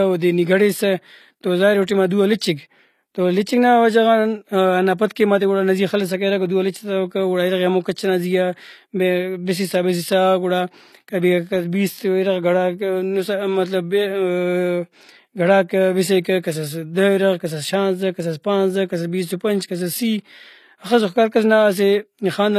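Throughout the speech the s sounds come out gritty and metallic, and nothing reaches above 14.9 kHz. The likely cause is HE-AAC compression at a rate fitting about 24 kbps: the treble is rebuilt from copied lower bands rather than simply removed, so it stays bright but mismatched instead of sounding dull.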